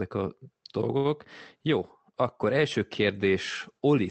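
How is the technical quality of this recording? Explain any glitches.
The recording has two audible faults: a steady gain rise across nearly the whole clip, and one brief stall near the first second. The speech arrives through a call codec whose band tops out around 8 kHz, consistent with Opus at roughly 24 kbps.

Automatic gain rising, from 0.12 s to the end of the clip: the gain control judged the incoming level too low and kept raising its gain step by step. Because the boost acts on the whole signal, the speech and the background noise swell together, so the recording grows louder over several seconds rather than holding a steady level.

Short stall from a late packet, from 0.97 to 1.07 s: a packet missed its playout deadline, leaving the jitter buffer with nothing to play. The receiver held the last sound for about 72 ms until the packet arrived, then resumed at the same point. Nothing is lost, but that moment drags audibly, and the stretched sound carries a slight buzz or dip. 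Everything after it plays about 72 ms later than it would have.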